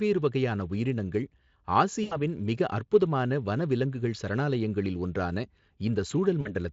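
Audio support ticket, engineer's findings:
VoIP packet loss concealed by the speech codec, 2.03–2.17 s (just before "மிக அற்புதமான வனவிலங்குகள் சரணாலயங்களில்") and 6.41–6.54 s. Decoder stretches the last pitch and filter into a fading buzz, then stays weak briefly after recovery. Gaps sound like roughly 80 ms and 40 ms of lost packets. Speex path itself sounds clean.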